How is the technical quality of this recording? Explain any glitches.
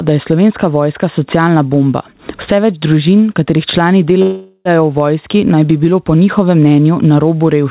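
The technical quality is poor, with two clear faults.

Gain pumping runs through the whole clip. The gain ducks under each louder stretch of speech, a swing of about 20 dB. The likely cause is input gain set far too high, with a fast limiter or compressor clamping down whenever the level rises. Loud and quiet passages end up squeezed together, so the speech sounds flattened. The telephone-band tone, with nothing above 4 kHz, fits a G.711 A-law call link at 64 kbps.

A call audio freeze begins at 4.22 s, right after "več družin katerih člani", and lasts until 4.68 s. For about 0.43 s the last sound is stretched into a fading buzz or hiss, and the final 20 ms or so drop to silence. The likely cause is packets stalling in transit until the jitter buffer ran dry. When they arrive, the speech resumes where it stopped. Nothing is lost, but everything afterward runs about 0.43 s late.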